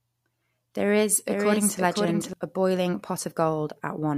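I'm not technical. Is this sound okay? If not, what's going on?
No. From 1.27 to 2.33 seconds there is a doubled audio track: the speech plays twice at once, with a second copy trailing about half a second behind and somewhat quieter than the original. It isn't an echo from a room, because the copy is just as clear and starts and stops abruptly. The likely cause is the same sound being picked up a second time through a slower route, or an edit leaving two misaligned copies stacked together.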